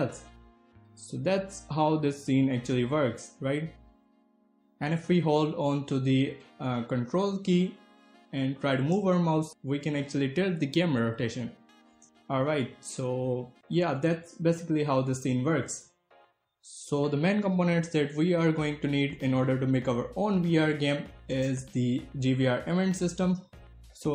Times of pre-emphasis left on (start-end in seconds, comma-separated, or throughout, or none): none